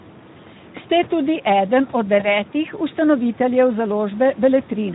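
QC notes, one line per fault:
throughout: Speex codec. The speech sounds hoarse and grainy, which fits Speex at roughly 11 kbps. Its CELP coder has too few bits to model the excitation cleanly. Faint room noise sits about 24 dB below the speech.
2.19–2.27 s: VoIP packet loss concealed by the speech codec. Right after "tudi eden od" the sound briefly smears into a weakened continuation, which fits a single lost 20 ms frame. The decoder extrapolated the previous pitch and filter, and the distortion lingers as its state recovers.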